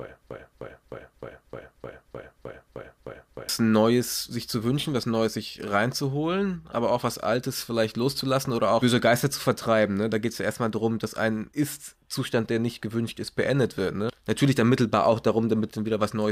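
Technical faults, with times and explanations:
0.00 to 3.49 s, broken-record loop: a 0.31 s slice of speech repeats ten times back to back, likely from a stalled stream resending its last fragment.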